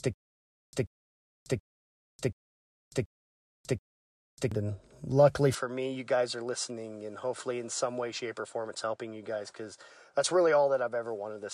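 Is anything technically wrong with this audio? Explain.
Yes, the speech has two faults.

From the very start to about 4.5 s there is a stutter with silent gaps. It is already under way when the clip begins. A single 135 ms burst of speech returns every 730 ms, six times, with about 595 ms of dead digital silence after each one. This is likely a playback or stream stall: each retry replays the last buffered fragment and then runs dry. Whatever should have been heard during those gaps is simply missing.

From 5.55 s to the end, the sound turns duller and a little quieter, by about 5 dB. Nothing reaches above 10.1 kHz, and new background noise sits roughly 45 dB under the speech. The change happens abruptly, with no silence at the join. The likely cause is an input switched to a poorer device partway through. That second microphone or headset path has a narrower band, its own tone and level, and its own noise floor.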